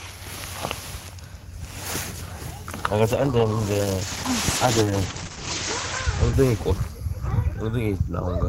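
A call bitrate drop runs from 3.08 s to 7.11 s in this recording of everyday sound. The call's bandwidth estimate fell and the encoder cut its bit budget sharply, to what sounds like roughly 10 kbps from about 32 kbps. With so few bits, the codec quantises coarsely, giving a rough, watery texture, and it narrows the audio band from 20 kHz to 8 kHz, so the top end goes dull. The worst stretch lasts about 2.5 s before quality recovers.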